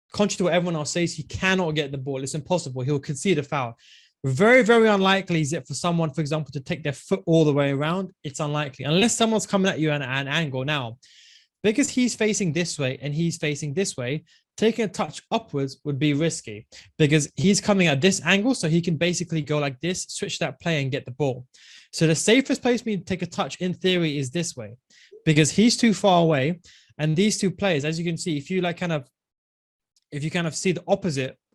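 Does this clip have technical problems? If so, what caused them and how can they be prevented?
Yes. The clip has short concealed packet loss at 8.99, 11.85, 15.05, 17.42, 19.41, 25.34 and 27.09 s. Each time, about 20 ms of audio failed to reach the decoder in time, and 40 ms at 27.09 s. The receiver bridged each gap by extending the preceding sound and then crossfading back. Each one is heard as a brief smear or wobble. Prevent it with a more reliable network path and a deeper jitter buffer.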